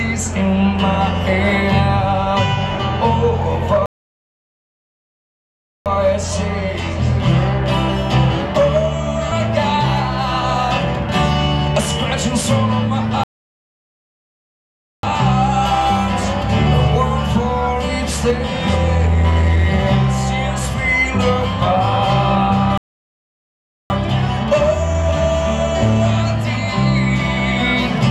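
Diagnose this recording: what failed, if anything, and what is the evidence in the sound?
Three playback stalls at the playback end: the sound cuts out mid-flow at 3.86 s for 2.0 s, at 13.24 s for 1.8 s, and at 22.78 s for 1.12 s, then carries on. The player was likely starved of data or had its thread blocked each time.

Two bursts of jitter buffer speed-up on the network receive side: 18.98 to 19.64 s runs at 115% speed, and 24.69 to 25.12 s at 109%, both with pitch unchanged. The receiver trimmed short pitch-period chunks, about a tenth of a second and about 50 ms in total, to drain a backed-up buffer.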